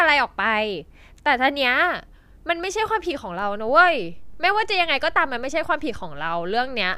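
At 3.42 s there's a DC step. The waveform's zero line suddenly shifts by about -33 dBFS and stays there to the end, so you hear one low thump right at that moment while the speech carries on unchanged.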